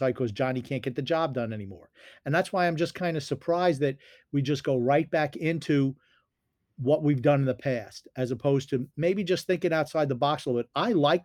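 No technical faults can be heard anywhere in this recording.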